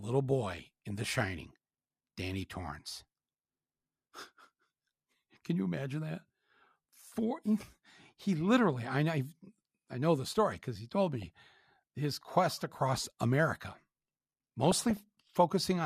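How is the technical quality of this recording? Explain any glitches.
Three short bursts of DAB burbling mar the speech, at 0.54–1.07 s, 11.22–11.62 s (between "story because he told" and "his quest across"), and 14.64–15.37 s. Weak reception let residual bit errors, around 0.4–0.5 percent, corrupt MP2 sub-band data, so wrong samples produce short blips of noise in single bands over the speech.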